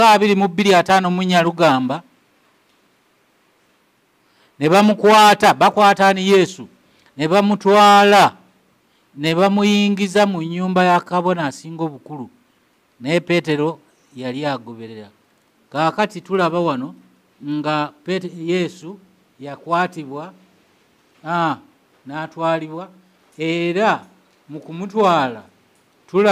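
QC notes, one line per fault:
No faults found. Nothing in this audio needs a QC note.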